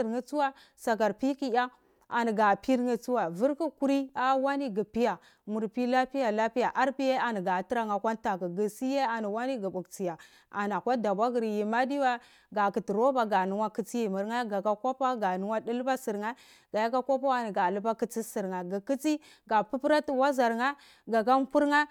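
No technical faults are audible.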